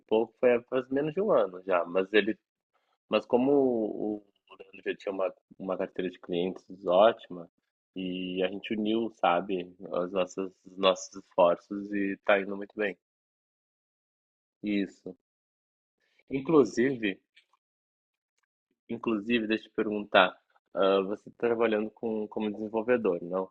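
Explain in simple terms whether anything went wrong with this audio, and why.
Nothing went wrong with this audio, because no technical fault can be heard anywhere in the recording.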